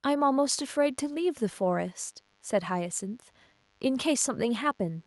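From about 0.6 s through to the end of the speech, there's DECT cordless phone buzz: a nearby handset or base firing radio bursts 100 times a second, rectified by the audio circuit into a thin, steady 100 Hz buzz full of harmonics, sitting faint, roughly 40 dB under the voice.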